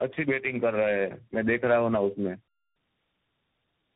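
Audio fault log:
Throughout: tandem speech coding. The speech sounds rough, muffled and warbly, with nothing above 3.8 kHz, consistent with three speech coders in a row, likely two AMR-NB stages and CVSD, each re-encoding the previous stage's already degraded output, so the artefacts compound.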